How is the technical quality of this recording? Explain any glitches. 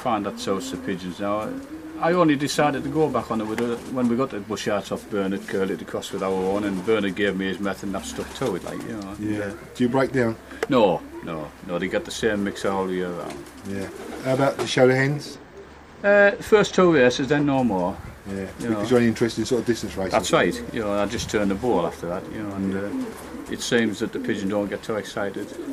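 The recording has one technical fault. From 15.34 to 17.55 s there is channel delay, heard as comb filtering. One channel runs late by about two samples, roughly a twentieth of a millisecond. When the channels are summed to mono, shared content cancels at evenly spaced frequencies. The first notch sits around 10 kHz. So the top end dulls. The notches stay fixed for the whole stretch.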